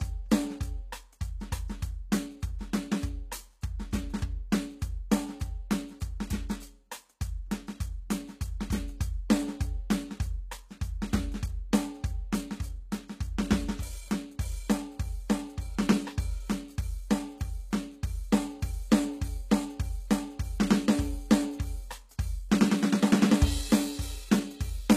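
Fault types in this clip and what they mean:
HE-AAC compression: the treble of the music sounds gritty and metallic, with clearly audible damage and nothing above 14.9 kHz, likely from HE-AAC at a low bitrate, around 20 kbps, rebuilding the upper bands from copied lower ones.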